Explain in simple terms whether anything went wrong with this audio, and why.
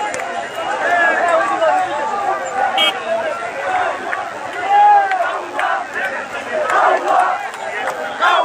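DECT cordless phone buzz sits quietly under the whole recording. A nearby phone's radio pulses leak into the audio as a thin, rasping 100 Hz buzz, much harsher than smooth mains hum.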